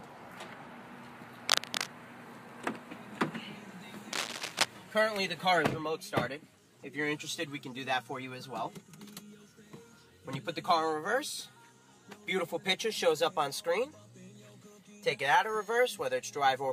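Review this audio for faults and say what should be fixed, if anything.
Cable scratch noise occurs from 1.49 to 1.87 s and from 4.13 to 4.65 s. It is dense, uneven scratching about as loud as the sound itself, likely from a worn cable or connector shifting. Unlike isolated clicks, it is heard as rustling over the sound for a moment. Replace the cable and secure it against movement.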